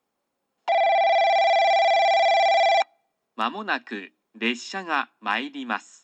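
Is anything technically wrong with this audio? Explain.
No, nothing in this audio points to a technical fault. There is no dropout, distortion or glitch to report anywhere in the clip.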